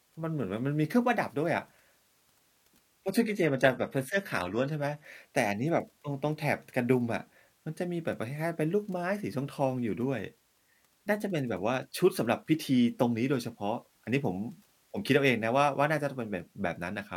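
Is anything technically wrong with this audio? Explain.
Yes. From 3.04 to 5.04 s this speech drops to an adaptive stream at a lower bitrate, which fits a switch from full-rate AAC to a low-rate HE-AAC version as the connection sagged. The treble is cut off above 14.9 kHz and turns synthetic with added codec artefacts, and quality changes abruptly with no gap.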